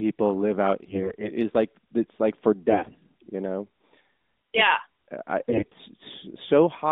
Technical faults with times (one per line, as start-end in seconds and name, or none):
0.86-1.31 AMR bit errors
2.70-2.96 AMR bit errors
5.38-5.74 AMR bit errors